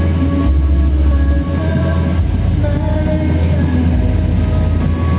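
Gain pumping runs through the whole clip. The gain swings around 5 dB. Loud and soft parts sit too close in level. The likely cause is excessive gain with a fast limiter clamping down. The narrow band, with nothing above 4 kHz, fits a G.711 call codec.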